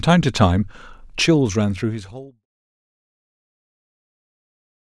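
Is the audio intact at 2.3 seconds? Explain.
Yes, the audio is intact at 2.3 seconds: the level there is low because the speech is near the end of a smooth fade-out that finishes at about 2.46 s, with no click or hard edge.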